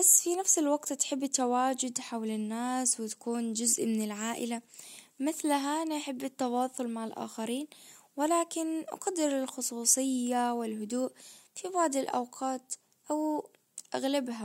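A speech recording with no audible technical fault anywhere in it.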